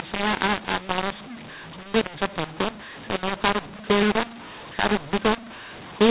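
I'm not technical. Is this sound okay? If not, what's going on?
No, the whole clip is affected by mu-law and A-law mixed up: the telephone-coded speech was read back with the wrong decoding rule, so it sounds harsh and gritty, and even the pauses hiss.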